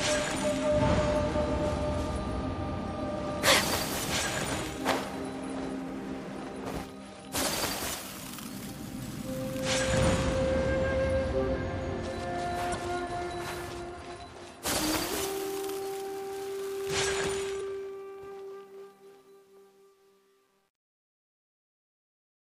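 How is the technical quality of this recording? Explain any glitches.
The recording has two audible faults: two brief glitches from damaged compressed data, and a grainy fade at the end.

At 12.71 s and again at 17.57 s, each lasting about 0.04 s, there is a short glitch. This is damaged data in a compressed stream. Corrupted bytes make the decoder misread the frames there, lose sync and jump to the next valid frame header.

From 17.25 s to the end, the fade-out turns gritty, and from 18.2 s onward the distortion is at its worst. This is truncation distortion on the fade. The volume stage keeps too few bits and adds no dither, consistent with roughly 10-bit resolution, so the quiet tail collapses into coarse square steps.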